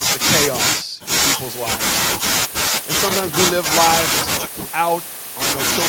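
No technical faults are audible.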